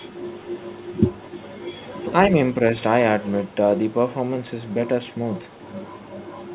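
A faint delayed copy of the speech trails it by about 1.04 s. It occurs from 0 to 2.13 s, 3.17 to 3.55 s, 3.9 to 4.12 s, and 4.47 s onward. This is likely an echo leak from a far-end loudspeaker.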